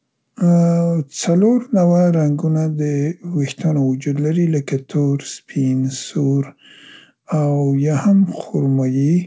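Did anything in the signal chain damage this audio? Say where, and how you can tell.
No, nothing in the chain damaged this speech. The audio has nothing above 8 kHz, which points to a wideband call path such as G.722, and the low end is trimmed as normal call microphone processing would do.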